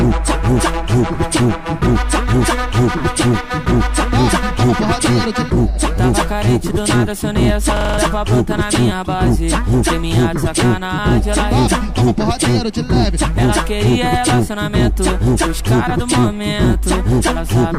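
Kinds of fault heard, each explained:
System hang loop: from 7.77 to 7.98 s a single 42.67 ms slice of audio repeats five times back to back, giving a rapid, rattling stutter at 23.4 Hz. The playback side stalled while the output hardware kept re-reading the same stretch of its ring buffer, and the loop length fits a 2048-sample buffer. Roughly a fifth of a second of the real signal is missing, replaced by those identical repeats.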